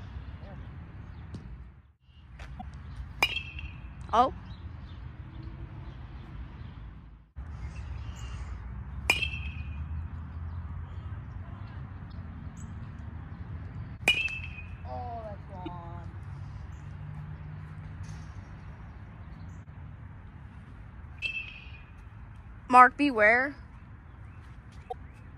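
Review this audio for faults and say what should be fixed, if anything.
Damaged data in a compressed stream causes five short glitches at 2.58–2.63, 12.08–12.14, 15.65–15.68, 21.17–21.23 and 24.88–24.94 s. Corrupt bytes make the decoder misread frames and hunt for the next header. Fix it by verifying transfers with checksums and re-fetching damaged frames before decoding.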